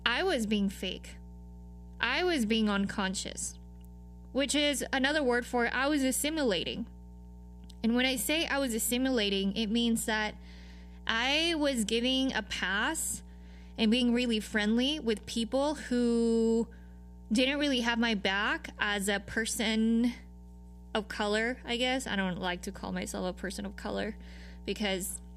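Mains hum runs under the speech from start to finish. It is a steady 60 Hz tone, roughly 20 dB below the speech, from a ground loop or nearby transformer.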